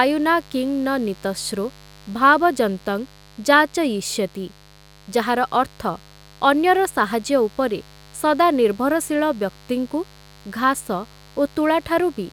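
Interference spikes from the 50 Hz mains supply get into the speech path throughout, laying a steady, raspy mains buzz roughly 25 dB below the speech level.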